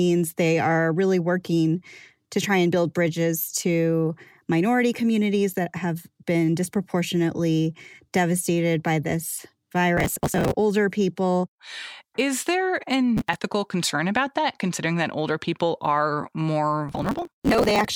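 Processor overload crackle appears at 9.97–10.55 s after "disproportionately devastated by this", at 13.17–13.38 s before "concern about that considering", and at 16.88–17.85 s after "that older people are". Repeated missed deadlines on buffers of roughly 5 ms leave hard-edged skipped gaps, heard as gritty crackle.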